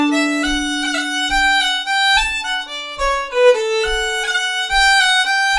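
Nothing in this audio stood out as a technical problem on listening.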